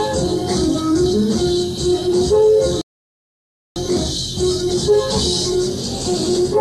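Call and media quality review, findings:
Rebuffering stall, 2.81 to 3.76 s. Sound drops to silence for about 0.95 s, then picks up at the exact point it stopped. Nothing skipped, only time added. Probable component: playback buffer. Mechanism: buffer drained before the next data arrived, so the player paused until enough audio was downloaded to continue.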